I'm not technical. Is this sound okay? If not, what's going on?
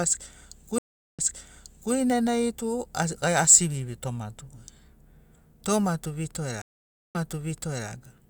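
No, it has two stream reconnect faults, at 0.78 to 1.93 s and 6.62 to 7.89 s. Each time the connection drops, the speech goes silent for about 0.4 and 0.5 seconds respectively, then picks back up roughly 0.74 s earlier, so you hear a bit repeated.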